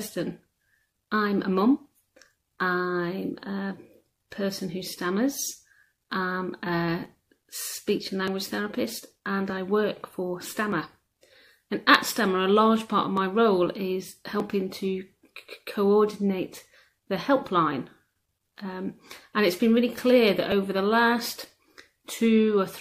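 From 0.93 s to 21.75 s a click recurs every 1.23 s, about twenty in all, heard whenever signal is present. The steady spacing points to clock drift buffer slips: two devices likely running on independent clocks that disagree by roughly 1000 ppm, so the buffer between them gradually over- or underflows until a block of around 50 samples is dropped or repeated, leaving a brief discontinuity in the waveform.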